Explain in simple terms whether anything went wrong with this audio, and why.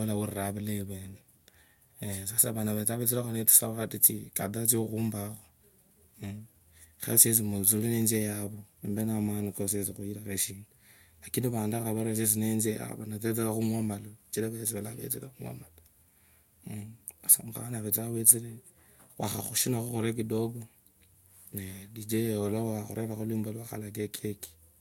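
Nothing stood out on listening to this recording of speech; it sounded the way it should the whole way through.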